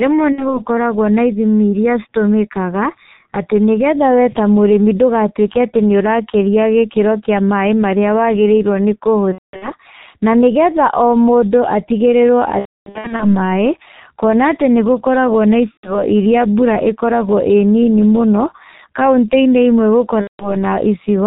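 Speech carried over a heavily compressed G.723.1 link at about 6.3 kbit/s, whose slow 30 ms frames and 4 kHz ceiling leave the voice muffled and hoarse, with smeared consonants throughout. VoIP packet loss concealed by the speech codec also breaks in five times. Each time, the decoder stretches its last pitch and filter into a fading buzzy tone or coloured noise before the voice recovers. The first is at 0.33–0.60 s, just before "na ithimi iria". The second is at 9.32–9.74 s, before "na nĩgetha". The third and longest is at 12.59–13.25 s, with gaps of up to about 270 ms. The fourth is at 15.71–16.02 s, after "nĩgũkoragwo na". The last is at 20.21–20.55 s.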